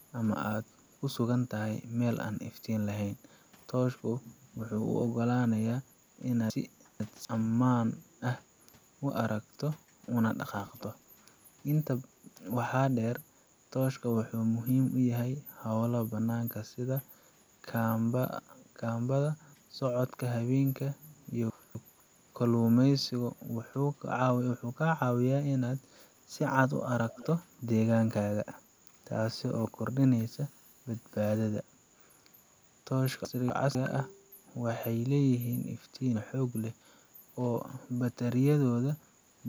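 Chunks out of order jumble this speech recording at 6.5 to 7.25 s, 21.5 to 22.0 s and 33.25 to 33.75 s. A 250 ms block plays late, two blocks behind at 6.5 s and one behind at the others, so the audio briefly scrambles at the hard joins. Echo leak follows at 10.47 to 10.83 s, 27.09 to 27.27 s and 27.56 to 27.61 s: a delayed copy of the speech about 255 to 277 ms behind, roughly 20 to 25 dB down and very faint in the last scrap. This is likely a loudspeaker's output reaching a microphone past an echo canceller that did not fully remove it.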